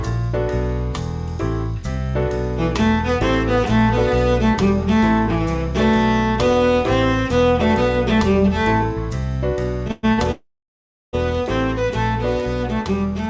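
At 9.91 s the sound sticks for about 0.12 s, ending at 10.05 s. This is a call audio freeze, likely from packets held up in transit, which left the jitter buffer empty so the last sound was continued as a fading buzz or hiss. On a spectrogram, the final spectral slice smears horizontally. On the waveform, a repetitive, decaying stretch appears before normal audio resumes.

From 10.13 to 10.20 s comes a short stall from a late packet. A packet missed its slot, so the receiver stretched the preceding sound by 45 ms until it arrived. The waveform shows a briefly elongated segment, and nothing is lost.

A second call audio freeze runs from 10.32 to 11.15 s, about 0.81 s, with the same likely cause. The held sound fades quickly into roughly 0.7 s of silence. The waveform flattens to a line, and the spectrogram goes blank across that span, capped as everywhere at 8 kHz, which fits a G.722 call path at 64 kbps.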